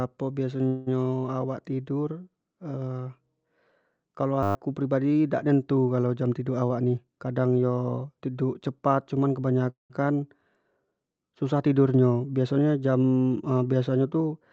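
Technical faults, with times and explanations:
0.67 to 0.89 s, call audio freeze: the sound stops advancing and the last moment is stretched into a fading buzz for about 190 ms, then resumes where it left off with nothing skipped, likely from delayed packets draining the jitter buffer.
4.43 to 4.55 s, system hang loop: a 10 ms slice of audio repeats exactly 12 times, giving a steady buzz at 100 Hz. The hardware kept replaying one ring buffer while the system stalled, and roughly a tenth of a second of real audio is lost.
6.62 to 8.09 s, jitter buffer speed-up: the speech runs at about 111% speed with its pitch unchanged, sounding hurried. The receiver trimmed many tiny pitch-period chunks, around 150 ms in total, to shrink a buffer that had grown too deep.
9.70 to 9.92 s, call audio freeze: the last sound is held as a decaying buzz that falls into about 150 ms of silence before the speech picks up again unbroken. 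The pause adds about 200 ms of delay, likely from packets held up in transit.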